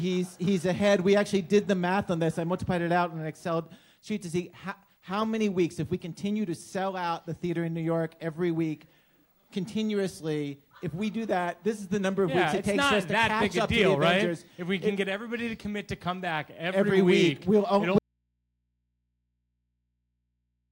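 The signal feeding the recording was most likely lost upstream while the input stayed open, producing an audio dropout to a faint residue at 17.98 s. The sound cuts off abruptly there rather than pausing or fading, and it never returns before the end of the clip. For the remaining stretch of almost three seconds, only a low mains hum from the live input can be heard, sitting roughly 55 dB below the level of the wanted sound.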